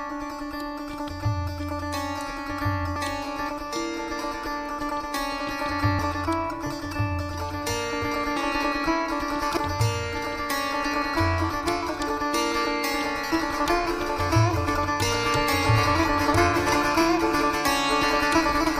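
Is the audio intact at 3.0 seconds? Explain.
No. Compressed frames are skipped at 2.95 s. Roughly 300 ms of audio is lost, about ten frames of 26.1 ms each. The jump lands as a brief smeared blip.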